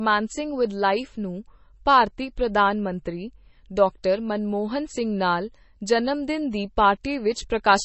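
Watery, swirly speech with no treble above 8 kHz and heavy smearing throughout points to MP3 compression, likely at a low bitrate around 26 kbps that starves weak frequency lines. At 7.04 s, just after "ਜਨਮ ਦਿਨ ਦੀ", a brief hiss of about 11 ms precedes a softened attack. This is pre-echo, where the codec spreads quantisation noise across its block into the quiet moment before the onset.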